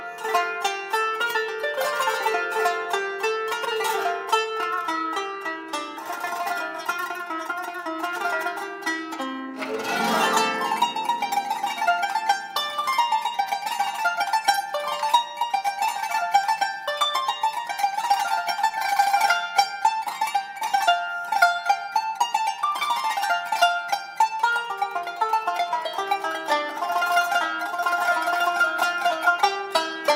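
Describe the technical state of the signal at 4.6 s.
At 4.6 s the signal is intact, with no dropout, distortion or other technical fault to be heard at that point.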